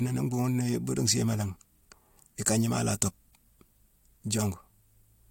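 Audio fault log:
No faults heard.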